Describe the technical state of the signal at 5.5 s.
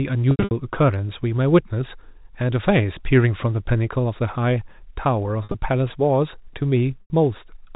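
Around 5.5 s the sound briefly turns held and buzzy, with a slight drone replacing the natural movement between 5.44 and 5.54 s. This is packet loss with pitch repetition: about 80 ms of audio went missing in short bursts scattered over 100 ms, the longest gap being 50 ms, and the receiver filled each hole by repeating the last pitch period. The concealed stretches keep the telephone band's 4 kHz ceiling.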